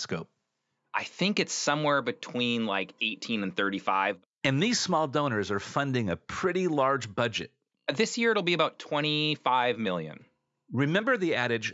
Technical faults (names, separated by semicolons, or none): none